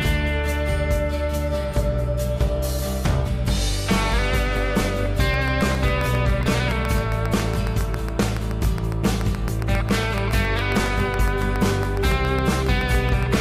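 A train of clicks runs from 5.34 to 13.36 s, about fifty regular pulses at 7.24 per second, roughly 10 dB above the sound, likely from electrical interference.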